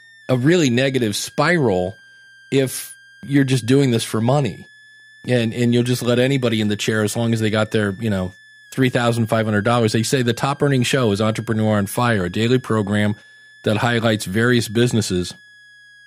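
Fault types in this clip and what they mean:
Switching supply whistle: a power supply runs in audible burst mode or beats with another one, leaving a faint high whistle wandering between 1.58 and 1.83 kHz under the speech throughout.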